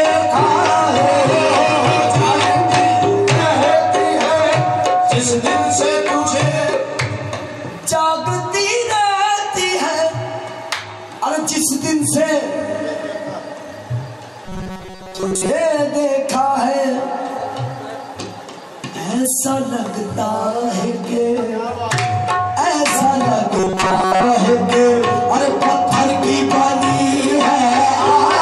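From 14.44 to 15.49 s and again from 23.57 to 24.24 s, the sound turns into a rigid metallic buzz at 188 Hz: robotic sound from repeated short buffers, likely from about 5 ms chunks looped over most of the missing audio. Unlike codec warble, the buzz holds one fixed pitch.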